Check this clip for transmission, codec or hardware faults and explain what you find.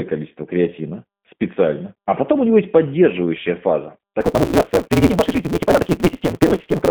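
Two faults are present. One affects the whole clip, and the other affects its last part.

G.729 codec damage runs from start to finish. The signal has passed through G.729A at 8 kbit/s, on a line band of 150 Hz to 3.5 kHz. Nothing above 3.5 kHz survives. The codec does not send the waveform. It sends a vocal tract filter, a pitch predictor and a few pulses per frame, and the decoder rebuilds the speech from those. The damage is plainly audible. The speech sounds rough, thin and synthetic.

A block size mismatch (truncated) begins at 4.20 s, right after "него есть поддерживающая фаза", and lasts to the end. One stage writes longer blocks than the next stage reads, so the tail of every block is dropped. The reads fit a 256-sample block. Each cut lands at the same rate, which gives a steady buzz at 172 Hz. Because so much audio is discarded, the speech runs about 1.88 times too fast.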